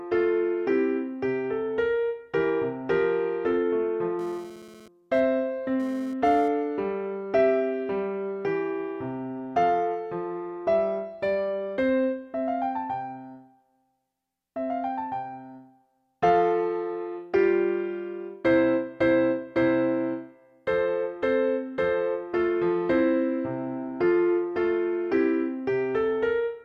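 From 4.19 s to 6.48 s a hard, raspy buzz sits on top of the sound, about 21 dB below it, pitched at 216.7 Hz with a dense stack of harmonics that has nothing to do with the material. This is GSM phone buzz: a nearby 2G handset was transmitting in pulsed bursts during a data transfer, and the audio circuitry rectified those radio pulses into an audible tone at the burst rate, which is why it appears for just this stretch.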